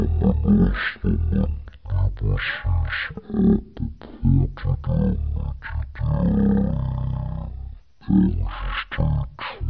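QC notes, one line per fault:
Throughout, wrong sample rate: the samples were clocked out at one third of the rate they were captured at, with no resampling in between, which fits 48 kHz material being played at 16 kHz. Every sample is held three times as long, so the speech runs at 0.333 times normal speed and drops by 19 semitones. Voices come out deep, slurred and drawn-out, with consonants smeared and the pitch and tempo falling together.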